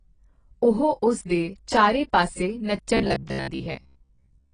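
A short speech recording that sounds dull and smeared all the way through, the kind of result you'd expect from heavy AAC compression. The top end is gone, and sibilants come out fizzy and a bit warbly. That's most likely AAC-LC squeezed down to something around 24 kbps, where the hearing model throws away a lot to hit the rate. Then, right after "ਉਸ ਦੇ ਚਾਰੇ ਪਾਸੇ", from 2.97 s to 4.53 s, the speech turns into a rigid metallic buzz, the robotic sound from repeated short buffers. The buzz sits at about 67 Hz, which points to a chunk of roughly 15 ms being looped over and over. About half of what you hear in that stretch is repeated material rather than new audio, so the words only roughly come through. The likely cause is audio arriving too seldom, with the playback side filling the gaps by replaying the last buffer.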